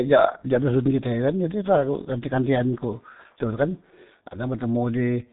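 From start to finish the speech sounds muffled and hoarse, with consonants smeared together and nothing audible above about 3.8 kHz. This is heavy G.723.1 codec damage: long frames and a slowly updated voice model, consistent with a bitrate near 6.3 kbit/s.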